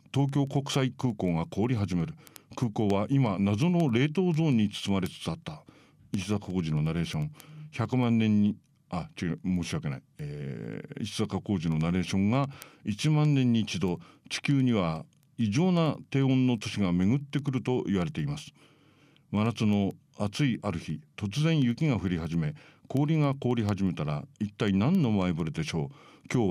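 Speech with word clock ticks running start to finish, 0.11 to 26.48 s: sharp single-sample slips about every tenth of a second, roughly 300 in all. The receiver's free-running clock is off the sender's by something like 200 ppm.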